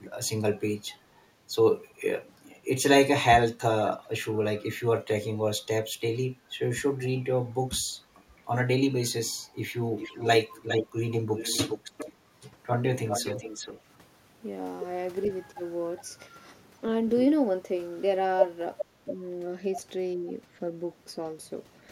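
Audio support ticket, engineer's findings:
Echo leak: delayed copy of the speech at 3.92–3.98 s, 9.98–13.81 s, 15.23–16.03 s and 18.79–18.85 s. Lag about 0.44 s, then 0.41 s. Sits about 20 dB, at times about 5 dB, below the speech. Likely far-end echo canceller passing loudspeaker pickup.

Speech suppressed in double talk: speech dips at 7.15–7.84 s (roughly 15 dB), 19.05–19.1 s and 20.16–20.27 s (roughly 5 dB). Likely the canceller attenuating the near talker during overlap.

Background gated by the echo canceller: room sound drops out briefly at 8.18–8.31 s, about 13 dB down. The canceller clamps the microphone while the loudspeaker plays, then releases.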